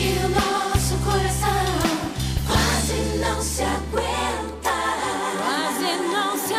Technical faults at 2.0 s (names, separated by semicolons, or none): none